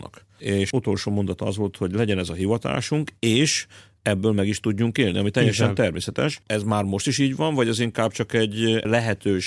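No dropouts, clicks, distortion or other faults turn up anywhere in the recording.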